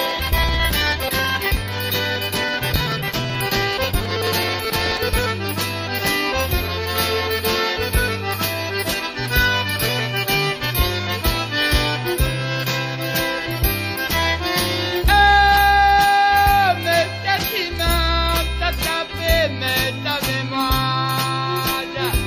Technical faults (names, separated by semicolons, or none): periodic USB or driver dropouts